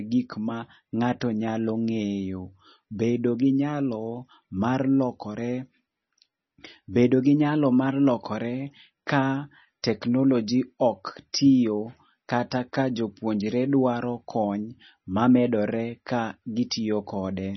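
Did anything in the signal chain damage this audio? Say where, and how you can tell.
Yes. Across the whole speech clip the sound is dull and watery, with a swirling, metallic chirp on s sounds and smeared consonant attacks. Nothing is heard above about 5.9 kHz, a hard treble ceiling rather than a gentle roll-off. The damage is at the codec stage, most likely heavy MP3 compression at a very low bitrate, around 24 kbps. Short of bits, the encoder cut the treble at a fixed frequency and zeroed weak spectral lines, which flicker on and off from frame to frame.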